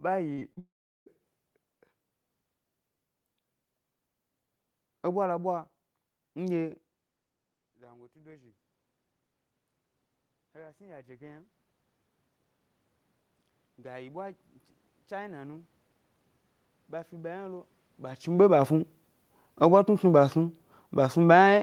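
Right at the start, three bursts of short concealed packet loss occur: audio packets failed to reach the decoder in time, and the receiver patched each gap by extending the preceding sound before blending back into what really arrived. The patches run about 42 ms from 0.33 s, 15 ms from 0.40 s and 36 ms from 0.53 s. They are heard as a quick smear and wobble in the opening sound, with the first two running together into one roughened stretch.

Straight after, from 0.59 to 1.08 s, comes what is likely a long network dropout, with nothing arriving for nearly half a second. The sound briefly continues as a fading extension of the last sound, then gives way to about 0.38 s of silence before the audio resumes further on, with that portion simply missing.

Later, automatic gain rising appears three times. In each case the gain control judged the input too quiet and slowly raised its gain. It rises about 4 dB from 7.76 to 8.63 s and about 5 dB from 10.40 to 11.57 s, both after the input level had fallen by about 22 dB. 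It then rises about 6 dB from 13.60 to 15.75 s. Each time, the voice and the room noise behind it swell up together over roughly a second or two. This is distinct from the level shifts near 6.5 s and 18 s, where the talker moves relative to the microphone.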